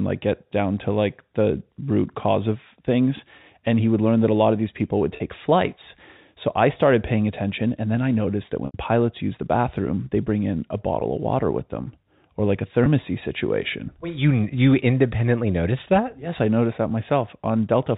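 Packet loss with pitch repetition occurs at 5.16–5.20 s, 8.66–8.74 s, 11.00–11.02 s and 12.84–12.86 s. Each gap is bridged by a repeated pitch period, heard as a brief held, buzzy tone; the longest loss, at 80 ms, fades into silence before the speech returns with a short cross-fade.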